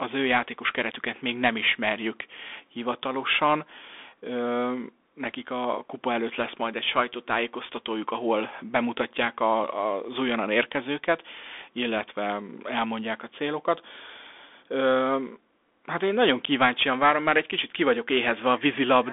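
From start to finish the speech runs through a Bluetooth CVSD headset codec, a one-bit delta coder consistent with a 64 kbps headset link. Nothing survives above 3.8 kHz, the band sits near 250 Hz to 3.5 kHz, s sounds turn scratchy, and grainy hiss rides underneath.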